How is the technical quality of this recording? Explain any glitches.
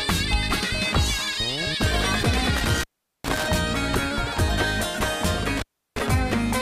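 The recording is marred by two dropouts from an intermittent contact. Between 2.57 and 3.46 s, and again between 5.57 and 6.01 s, a loose cable or plug briefly opens the signal path, for about 409 ms and 341 ms. The sound cuts out, leaving faint hiss, with crackle where the connection breaks and remakes.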